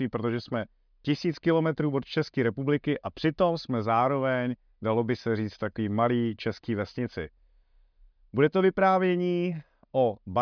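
Speech recording with no audible technical faults anywhere in the signal.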